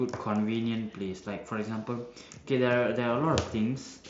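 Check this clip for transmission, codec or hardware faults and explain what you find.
No transmission, codec or hardware fault turns up in this speech clip. It has come through a Bluetooth mSBC headset link, which leaves nothing above about 7.7 kHz and a light graininess on the louder moments.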